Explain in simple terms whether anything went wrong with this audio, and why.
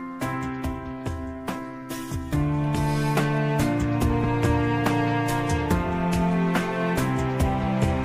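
Nothing went wrong here: the signal comes through in sound technical shape, with no disruptions or damage to be heard anywhere in it.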